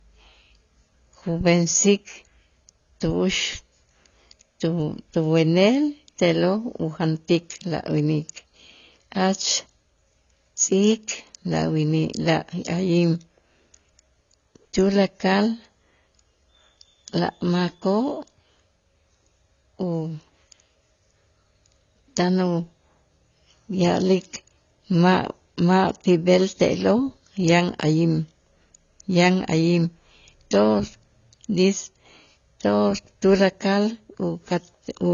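Throughout, the speech sounds dull and smeared, with nothing above 6.9 kHz. Sibilants fizz and warble. Likely AAC compression, consistent with AAC-LC near 24 kbps.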